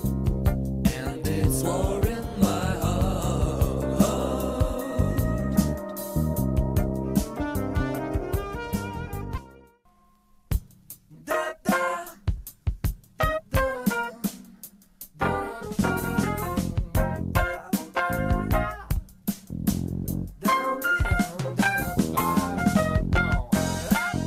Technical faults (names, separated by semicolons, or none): skip ahead; jitter buffer speed-up